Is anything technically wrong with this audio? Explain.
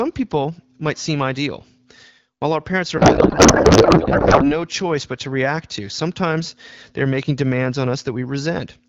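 Yes. From 2.97 to 4.52 s a codec payload misread replaces the speech with garbled noise and warble that barely tracks it. The sound points to AMR-WB frames packed octet-aligned but read as bandwidth-efficient, so fields land in wrong bit positions until packing realigns. Elsewhere the AMR-WB coding at 12.65 kbit/s sounds clear.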